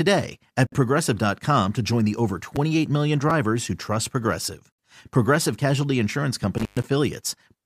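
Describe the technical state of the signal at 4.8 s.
Just before 4.8 s the speech is interrupted by a gap at a join of encoded pieces, a gap of about 64 ms from 4.72 to 4.79 s. The audio was encoded in separate pieces, 4 s long, and joined untrimmed, so each piece's start-up delay and padded final frame remain as dead air. Unlike a dropout or packet loss, nothing is missing: the speech resumes exactly where it stopped, with edges smeared by the codec.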